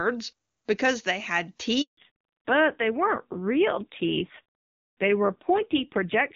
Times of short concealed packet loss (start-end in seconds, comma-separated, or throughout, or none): none